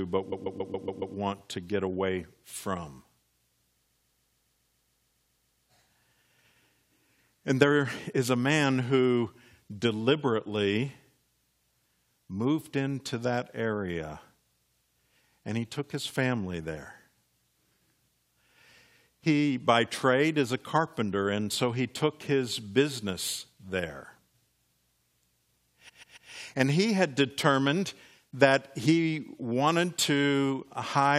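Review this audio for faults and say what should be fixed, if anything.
Repeated frames cause three stutters in the speech. From 0.31 to 1.15 s, just before "to get away from", a 139.3 ms block plays six extra times. From 3.84 to 5.65 s it repeats thirteen extra times, and from 25.88 to 26.30 s three times. The same slice of compressed audio is decoded again, adding about 0.84, 1.81 and 0.42 s. Unlike a dropout, nothing is missing, and unlike an echo, each repeat is identical and at full level. Deduplicate frames by sequence number before writing or sending.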